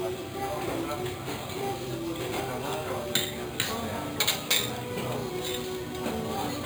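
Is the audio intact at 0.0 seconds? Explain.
No. Imaging from sample-and-hold upsampling runs through the whole clip, 0.0 s included. Samples were simply repeated without smoothing, which fits an original rate near 11 kHz, so a mirrored copy sits at 5.5–11 kHz, about 10 dB down: a bright metallic fizz riding the sound.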